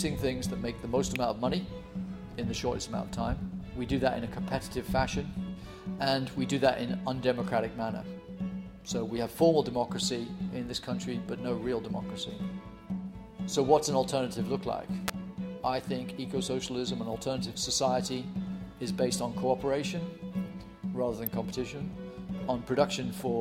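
Sharp snaps cut in on top of the sound at 1.16 s, 15.09 s and 21.27 s, the middle one loudest at around -10 dBFS, the others around -15 dBFS. These electrical switching spikes are likely brief arcs from a nearby switch or motor coupling into the audio line.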